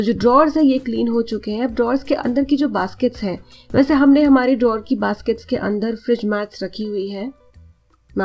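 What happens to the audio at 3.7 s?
Nothing goes wrong at 3.7 s: the audio carries straight through, with the call path limiting it to nothing above 8 kHz, as it does throughout.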